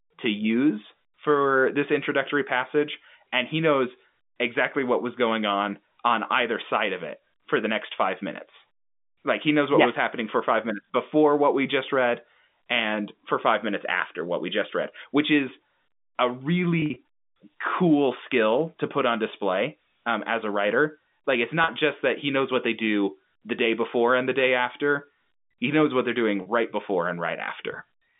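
At 16.8 s, just after "read which is a", the sound turns briefly held and buzzy for about 160 ms. At 21.64 s, right before "just that he knows", and at 26.42 s, between "he knows what they're" and "right before and", it does the same for about 40 ms each. This is packet loss with pitch repetition: missing stretches were bridged by repeating the last pitch period. In the first event about 80 ms was lost in runs of up to 40 ms. All of it sits inside the 150 Hz to 3.6 kHz telephone band of the G.711 line.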